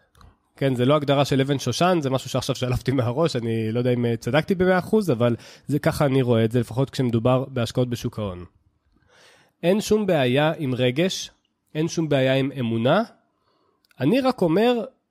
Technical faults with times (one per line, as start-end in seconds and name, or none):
none